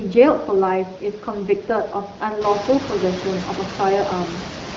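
No technical faults can be heard; the wideband phone coding, which fits AMR-WB at around 12.65 kbit/s, leaves the speech clear, and the room's background noise rising by about 15 dB at roughly two and a half seconds stays about 12 dB below the speech.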